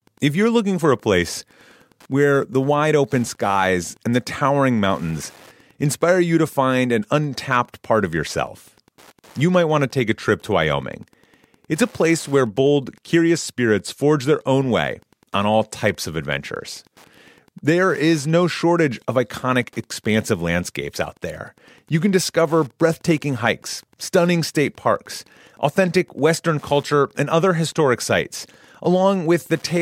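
From start to end, the speech carries Wi-Fi interference. A nearby radio's beacon, every 102.4 ms, is being rectified by the audio circuit. It comes through as a steady tick about ten times a second, sitting well below the speech.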